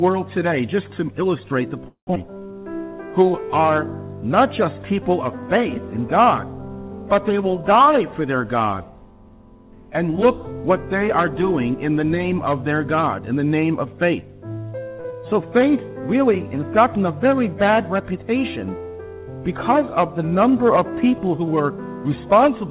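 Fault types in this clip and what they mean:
call audio freeze: From 1.88 to 2.09 s the sound stops moving forward for about 190 ms. The last sound is carried on and fades, and about 110 ms of that is silence. Playback then resumes where it left off, with nothing lost. The likely cause is delayed packets leaving the jitter buffer empty. On a waveform the envelope decays to a flat line. On a spectrogram the harmonics smear into a fading band, then a blank column.
skip ahead: At 2.15 to 2.17 s and again at 15.10 to 15.14 s, playback jumps forward, dropping roughly a tenth of a second of audio each time. Only a few milliseconds of filler bridge each jump. Audio that was already queued behind the gap was played immediately, so the two sides are butted together. On a waveform this shows as an abrupt change in envelope or phase. On a spectrogram the harmonic tracks break and restart at new positions, with no gap between them.
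jitter buffer slow-down: From 2.28 to 3.63 s the audio plays at about 91% speed, adding 127 ms. From 15.28 to 16.02 s it plays at about 88%, adding 95 ms. The receiver rebuilt its reserve by repeating single pitch periods many times. The result is drawn-out sound at unchanged pitch. On a spectrogram the harmonics stay at the same height but stretch horizontally. On a waveform the cycles repeat with near-identical shape.
short stall from a late packet: At 15.01 to 15.06 s, one packet missed its playout slot. The receiver held the preceding sound for about 36 ms until the packet arrived, then continued from the same point, so nothing is missing. The sound is briefly held too long, with a slight buzzy dip. On a waveform a few cycles repeat with a small amplitude sag. On a spectrogram the harmonics under 4 kHz flatten into a short frozen strip.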